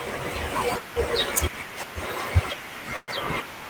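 Speech, with a call audio freeze from 2.96 to 3.11 s, likely packets delayed in transit that left the jitter buffer empty. The last sound is stretched into a fading buzz for about 117 ms, then roughly 10 ms of near-silence, before speech resumes where it paused, nothing lost but now about 117 ms late.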